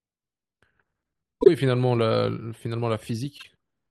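Frames out of order at 1.41 to 1.48 s and again at 3.38 to 3.45 s: two neighbouring blocks of about 24 ms, which points to single codec frames, were decoded in swapped order, so each stretch of speech plays with its halves exchanged, giving a brief garbled flutter but no lost time.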